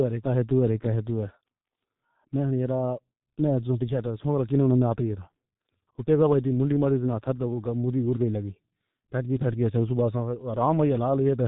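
From start to finish, the speech carries G.723.1 codec damage, and it is heavy. Nothing above about 3.8 kHz survives, so the top end is simply gone. The speech sounds muffled and boxy. The codec rebuilds the voice from a coarse model in long frames, refreshed only slowly. That leaves a rough, hoarse texture, and consonants smear into each other. The starved sound points to a very low rate, near 6 kbit/s.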